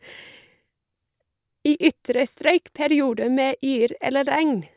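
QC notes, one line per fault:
Nothing to log for this speech clip. It contains no faults to report.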